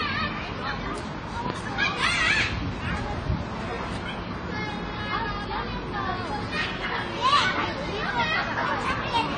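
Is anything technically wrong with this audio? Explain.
Yes. AAC compression runs throughout: nothing sounds above 10 kHz, and the audio is dull and smeared, with a warbling, fizzy texture. This is likely AAC-LC at a low bitrate, consistent with about 24 kbps, where the encoder lowers its cut-off and coarsely quantises or empties bands.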